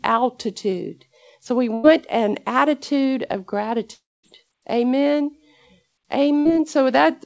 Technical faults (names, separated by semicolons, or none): burst of packet loss; long network dropout